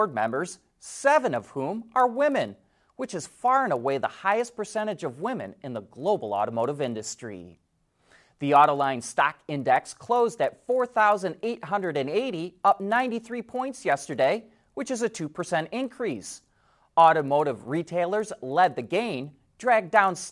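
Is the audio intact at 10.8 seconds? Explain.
No: at 10.8 s, as throughout, the resampler restarted on every block, leaving a small error at each 40 ms block edge during the 48 kHz to 24 kHz conversion. The result is regular ticks at 25 Hz under the speech, seen as evenly spaced vertical spectrogram streaks.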